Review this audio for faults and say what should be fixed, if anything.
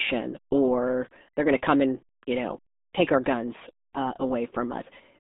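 RealAudio 14.4 codec artefacts run throughout the speech: the band sits between about 200 Hz and 3.7 kHz, with nothing above 3.8 kHz, and heavy gargly, muffled smearing that fits an 8 kbit/s dial-up speech coder discarding most spectral detail. Prevent this by encoding from the original source with a modern wideband codec at an adequate bitrate.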